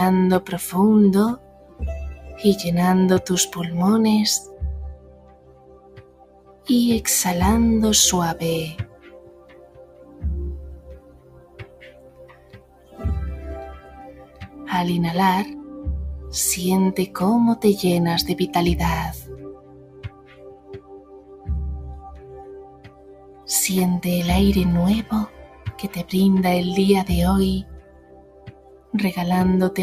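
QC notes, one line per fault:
Throughout: noise suppressor applied to music or sounds. A suppressor tuned for speech is treating sustained, steady parts of this audio as noise, with its gain swinging by roughly 20 dB as it decides what to keep. Onsets punch through while held material and decays get pulled down, so the sound pumps and thins between attacks. Unlike a compressor or limiter, the turn-down follows how steady the sound is rather than how loud it is.
1.36–2.4 s, 4.42–6.68 s, 8.81–14.58 s, 19.3–23.48 s, 25.28–25.73 s, 27.69–28.93 s: sound cut by the noise suppressor. In these stretches the suppressor clamps down hardest, dropping steady or fading material by about 12 dB (about 9 dB at 25.28–25.73 s), for anywhere from about half a second to about four seconds of each span. Tails end early and sustained tones sag, yet sudden transients within the same spans mostly come through, which separates this from a dropout or a fade, where everything falls together.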